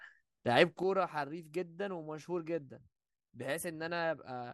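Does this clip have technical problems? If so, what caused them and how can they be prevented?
Yes: a sudden gain jump at 0.83 s drops speech and background noise together by about 9 dB, likely from an unramped gain change; the waveform steps down abruptly. Ramping gain changes over a few milliseconds prevents it.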